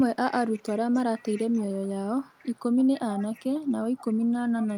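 An echo canceller on a loudspeaker end of the call is likely failing to remove all of its microphone pickup, so an echo leak sends the speech back. From 0.00 to 1.91 s a faint copy trails the speech by 299 ms, sitting roughly 25 dB below it, heard as a delayed ghost behind the speech.

Within that span, from 0.44 to 1.39 s, the same canceller is likely confused by both sides talking at once and turns the near talker down along with the echo. This is speech suppressed in double talk. The speech dips by up to around 20 dB in broken patches, adding up to about 0.4 s, so parts of phrases go dull or drop out.

The echo leak returns from 2.25 to 4.78 s, likely from the same incomplete cancellation. It has the same 299 ms delay, but the copy is now only about 20 dB down, so the repeated tail is more plainly audible behind the speech until the end.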